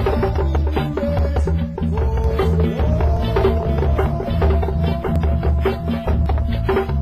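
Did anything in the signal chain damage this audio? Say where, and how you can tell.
Yes. There's an overlap between stream segments, so this is a streaming or playback-stage problem. You get tiny skips at 1.19, 3.17 and 5.16 s, about two seconds apart. That fits 2-second segments whose timestamps overlap, with the player trimming 6 to 17 milliseconds of real audio so the waveform jumps.

There's also a doubled audio track from 2.24 to 6.26 s. A full-band copy sits about a second behind, roughly 5 dB down, with no decay or room colour, and it starts and stops abruptly. The likely cause is a second, slower capture path mixed back in.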